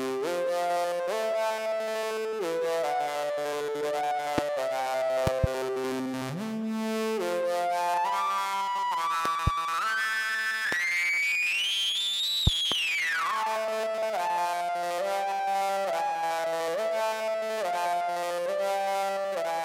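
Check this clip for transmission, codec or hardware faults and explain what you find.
There are hardware faults: loud pops at 4.38–4.41, 5.27–5.46 (double), 9.25–9.50 (double), 10.72–10.75 and 12.47–12.74 s (double). These are sharp pulses about 20 dB above the audio, which continues underneath, likely from voltage spikes from a switch, connector or driver glitch.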